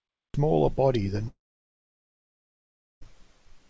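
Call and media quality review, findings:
Cut-off start, 0.00 to 0.34 s: digital silence, then speech enters abruptly at 0.34 s mid-sound, with no attack or fade-in. Capture or stream began late and clipped the opening of the utterance. Probable component: recording start or stream setup, not the codec.

Long network dropout, 1.28 to 3.03 s: audio stops mid-speech. A brief concealment tail decays into roughly 1.6 s of silence, then speech resumes with about 1.74 s of content missing. This is likely packet loss on the network leg. The jitter buffer ran dry, and the concealment extrapolated the last sound before muting. The wideband band limit at 8 kHz, consistent with a G.722-class call codec at 64 kbps, is present throughout and is separate from these faults.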